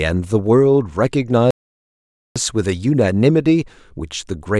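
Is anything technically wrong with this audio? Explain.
Yes. From 1.51 to 2.36 s the speech suffers an audio dropout to silence: about 0.85 s is lost, likely because the input feed failed while writing continued. The sound halts abruptly into dead silence with no room tone, appearing as a flat waveform line and blank spectrogram band.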